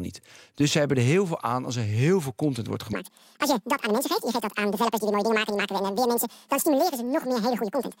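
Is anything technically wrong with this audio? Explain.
Yes. From 2.93 s to the end, the audio is read two samples at a time. Pairs become single frames, so the speech runs at 2x speed, an octave higher.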